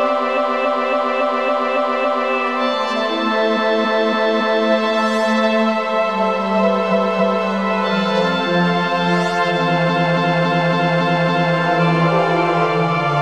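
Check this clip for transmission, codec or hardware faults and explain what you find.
Repeated frames occur at 0.33–2.28 s, 3.53–4.65 s, 6.88–7.43 s and 9.85–11.52 s. Each time a 278.6 ms block, consistent with six compressed frames, was sent more than once and replays as a stutter (7, 4, 2 and 6 extra plays), lengthening the audio by about 5.3 s.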